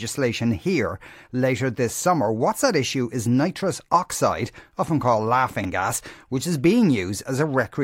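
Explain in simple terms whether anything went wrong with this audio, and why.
Something did go wrong, twice. At 4.12 to 4.14 s and again at 5.61 to 5.65 s the speech has chunks out of order. The sound is cut into 10 ms pieces, and one piece played too late, after the pieces meant to follow it: one chunk late the first time, three the second. Nothing goes missing, but the order is scrambled, with three abrupt joins that give a brief jumbled blip.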